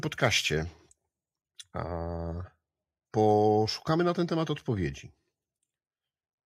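No technical faults are audible.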